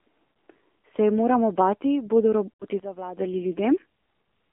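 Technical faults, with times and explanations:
Throughout: AMR narrowband mobile codec, sound confined to roughly 250 Hz to 3.4 kHz at a bitrate near 7.4 kbps, giving plainly audible buzzy, synthetic vocal-tract modelling.
0.32–0.36 s: lost AMR speech frames, a 40 ms gap where the decoder repeats prior pitch and filter settings, heard as a brief dip or warble.
2.53–2.65 s: lost AMR speech frames, just after "je moramo bati bodo", 80 ms of concealment drawing the sound out and fading before it returns rough.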